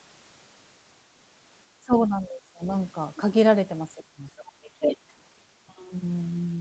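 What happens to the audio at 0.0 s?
Nothing goes wrong at 0.0 s: the audio is intact there, carried through the call microphone processing and the Opus call path with only their normal band limit near 8 kHz.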